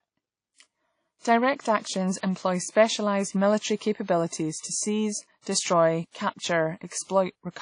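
From start to finish the speech carries damage that is most likely WMA compression, at a level that is plainly audible. The transform coder smears its quantisation noise over tens of milliseconds, so consonants ring and vowels sound washy, with a hiss that swells and fades with the voice. Nothing remains above 10.1 kHz, consistent with a low bitrate near 32 kbps. A spectrogram would show a hard ceiling at that frequency and patchy, blocky gaps where weak components were zeroed.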